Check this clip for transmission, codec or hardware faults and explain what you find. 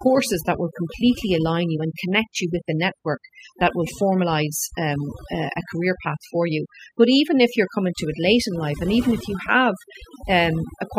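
One fault runs through the whole clip: overdone noise removal. The background is near-silent and twinkling, because an overly aggressive noise reducer cuts any frequency band near its noise estimate, taking quiet speech detail with it.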